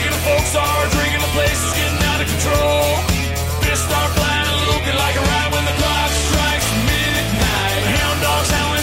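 From 4.28 to 6.28 s the adaptive stream drops to a lower bitrate: the connection apparently slowed, and the player switched abruptly, with no gap, to a much leaner encoding, fitting a move from about 96 kbit/s AAC to about 20 kbit/s HE-AAC. The treble turns thin, with nothing above 14.9 kHz. On a spectrogram the top band goes empty for two seconds, while the waveform stays continuous.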